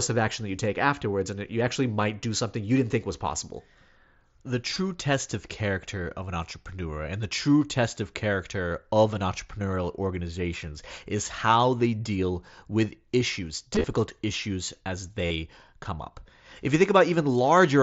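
Concealed Bluetooth headset packet loss hits at 4.74 to 4.76 s, before "test of character of", and at 8.67 to 8.71 s. Scattered losses follow from 13.74 to 13.84 s, after "they deal with issues", then 15.26 to 15.31 s, before "come up". Lost packets are replaced by repeated recent waveform, heard as brief buzzy fills. Each ends in a slight warble as real audio resumes.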